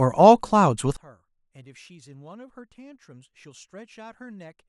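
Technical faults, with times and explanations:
0.97 to 4.69 s, one channel inverted: from 0.97 s to the end, the speech drops by about 26 dB in mono, leaving a faint residue. The likely cause is one stereo channel with reversed polarity, so the content shared by both channels cancels when they are summed.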